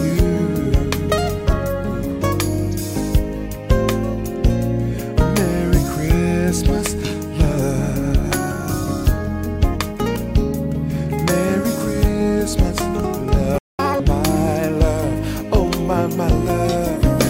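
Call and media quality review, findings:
Playback stall at 13.58 to 13.79 s: output drops to silence for about 0.2 s mid-flow, then resumes. Likely the player buffer ran dry or its audio thread got blocked, so nothing was written out until it recovered.

Catch-up at higher speed at 13.79 to 14.00 s, right after the gap: audio runs at 2x, pitch up around ten semitones. The player resamples the backlog to claw back the lost time, then drops back to normal rate.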